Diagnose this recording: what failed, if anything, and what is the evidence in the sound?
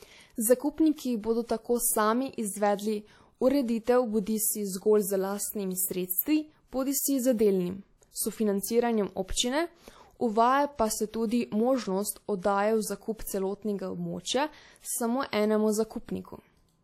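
Codec stage: the speech carries WMA compression damage from start to finish, plainly audible as a ringing, washy smear and a hiss that swells and falls with the speech instead of sitting at a steady level. Nothing remains above 17.4 kHz. The likely cause is a transform encoder using long blocks, spreading quantisation noise over tens of milliseconds, at a rate that fits about 48 kbps. A fixed noise floor would not track the signal like this.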